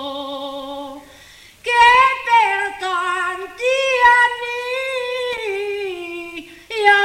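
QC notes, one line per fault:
5.32–5.38 s, loose connector crackle: a brief irregular burst of scratchy crackle, about 55 ms long, as a worn contact rapidly makes and breaks and chops the sound. Unlike a single digital click or clean dropout, it is ragged and uneven.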